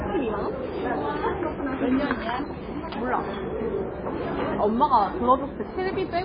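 Throughout the clip, nothing is present above 5 kHz, and the remaining sound has a watery, swirling texture with smeared attacks. This is heavy MP3 compression, likely at a very low bitrate near 16 kbps, where the encoder drops treble and toggles weak frequency lines frame to frame.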